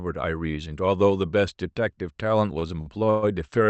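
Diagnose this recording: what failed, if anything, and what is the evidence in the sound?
Repeated stalls (stutter) between 2.59 and 3.25 s, at the network and jitter-buffer stage of a call path whose Opus-style coding audibly limits the speech to about 8 kHz. Packets arrived late or too slowly, so the buffer ran dry four times, the longest for 121 ms. Each time the receiver stretched the last sound, fading it in the longer waits, filling about 208 ms, roughly a third of that stretch. Nothing is lost, but the speech drags and stutters.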